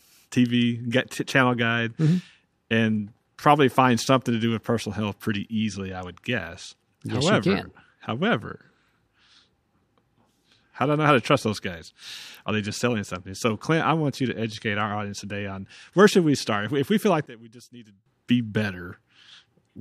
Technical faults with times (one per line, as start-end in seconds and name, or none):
17.26-18.06 one channel inverted